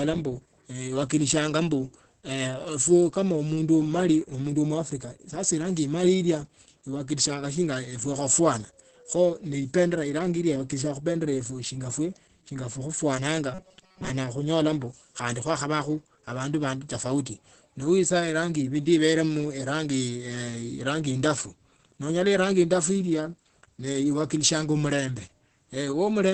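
It's a speech clip with Opus voice compression all the way through. Nothing reaches above 8 kHz, and the voice is muffled and hoarse in the way heavy SILK-mode coding at around 10 kbps would leave it. From 13.54 to 14.10 s, just before "khunyola ombu khandi khwakhavakhu", the voice turns into a rigid metallic buzz at 188 Hz. That's most likely robotic sound from repeated short buffers, with about 5 ms chunks looping over most of that stretch.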